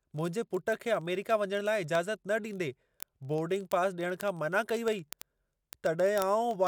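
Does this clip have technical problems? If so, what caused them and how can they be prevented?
Yes. Word clock ticks run from 0.12 to 6.67 s, steady clicks about every 20 ms. This is an unlocked clock drifting roughly 1000 ppm and slipping single samples; random clicks would not keep such regular spacing. Prevent it by locking the receiver to the sender's word clock.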